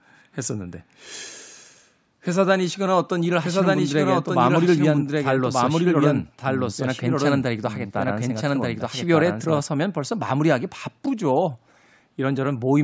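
A second copy of the audio was most likely being mixed in from a slower capture path, producing a doubled audio track from 3.43 to 9.61 s. That copy trails by about a second at roughly equal loudness, dry and band-limited to 8 kHz like the call path, and cuts in and out abruptly.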